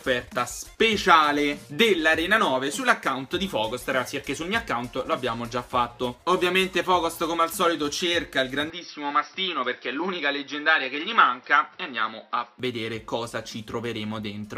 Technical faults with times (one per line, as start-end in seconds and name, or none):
8.70-12.59 input switched to a poorer device